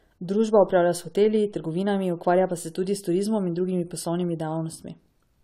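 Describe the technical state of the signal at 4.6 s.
At 4.6 s the signal shows generation loss, which runs through the whole clip. The speech sounds swirly, smeared and hollow, with blurred attacks, which likely comes from about four successive AAC-LC encodes, each requantising on a shifted frame grid, in a chain that fits roughly 96 kbit/s. On a spectrogram, nothing appears above 17.9 kHz, and the upper bands show accumulated speckled noise; waveform transients look softened.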